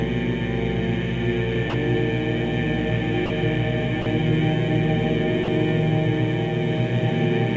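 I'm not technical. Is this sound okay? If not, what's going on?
No. There are four brief gaps, at 1.70, 3.26, 4.02 and 5.44 seconds, each about 40 ms long. The sound is replaced by a soft, steady hiss. This is sound dropped by the voice detector. The sender likely mistook real sound for background and paused.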